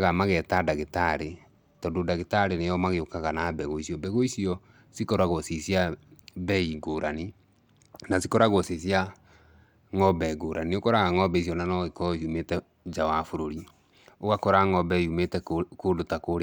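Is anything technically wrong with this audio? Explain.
Yes, there's a Bluetooth SBC bit pool drop at 1.26 to 4.26 s, 6.44 to 8.49 s and 11.58 to 12.39 s. Each time the link starved the encoder and the top sub-bands lost their bits, so the speech turns dull and gritty. It sounds like a fall from bit pool 31 to around 14, roughly 99 kbps.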